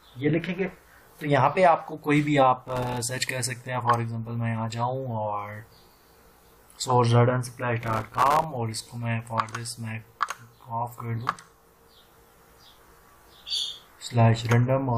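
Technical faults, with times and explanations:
2.62–2.98 s, 7.81–8.44 s and 11.28–11.54 s, processor overload crackle: three bursts of gritty, tearing crackle over the sound, the middle one longest. The processor missed dozens of deadlines on very short buffers of a millisecond or two, and each miss left a hard-edged sliver of silence.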